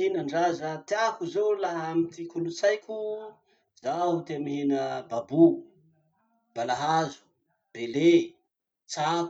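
No technical faults can be heard anywhere in this speech recording; the signal holds steady throughout, with no disturbance to point to at any moment.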